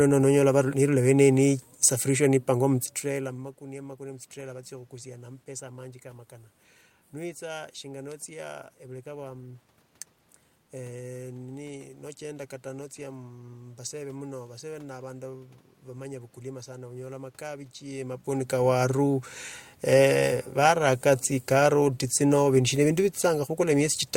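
A speech recording with no technical fault to be heard in it. The room's background noise is present throughout, and the level at the microphone shifts around 3 s and again around 18 s as the talker moves.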